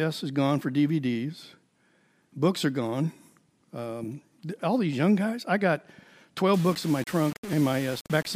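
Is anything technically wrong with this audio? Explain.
Yes, there are two faults.

From 6.54 s to the end, the speech turns gritty and grainy: likely low bit depth without dither, about 5 bits with rounding. Waveforms show visible stair-steps, and spectrograms show broadband hash tracking the speech, roughly 20 dB down.

At 7.53 s, a small skip suggests a dropped buffer (overrun), with about 5 ms lost and the edges spliced together. This shows as a waveform discontinuity and a thin vertical spectrogram line.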